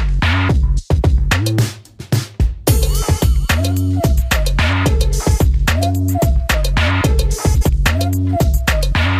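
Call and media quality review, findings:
Frames out of order: adjacent frame runs decoded swapped at 3.21 s and 7.54–7.69 s (about 13 ms and 70 ms blocks), giving garbled flutter.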